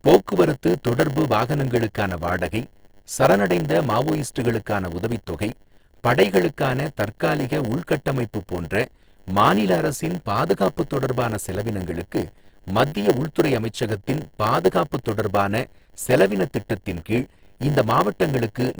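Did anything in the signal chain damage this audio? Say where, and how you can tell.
Yes. A steady 100 Hz buzz runs throughout, with speech slowed to 0.919 speed at normal pitch: a block size mismatch (padded) in the buffer stage, zero-filling each short block.

A brief click at 11.57 s is a repeated buffer. About 1.33 ms of audio replays once, which fits a 64-sample driver buffer that briefly ran dry.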